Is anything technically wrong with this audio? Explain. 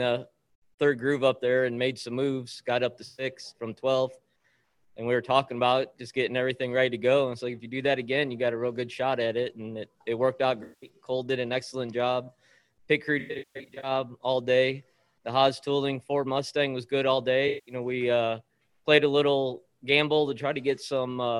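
Yes. There is AAC frame loss with concealment at 3.05–3.26 s, 10.63–10.89 s, 13.19–13.91 s and 17.48–17.75 s. When frames drop out, the decoder rebuilds the gap from the last good spectrum. That covers about 128 ms at the first event and 192 ms at the second and fourth. In the third, about 448 ms is lost in bursts across that span, the longest run around 150 ms. Each patch sounds smeared, noisy or phasey. On a spectrogram, the gaps show as blurred, frozen bands. On the waveform, they show as noisy, flattened stretches.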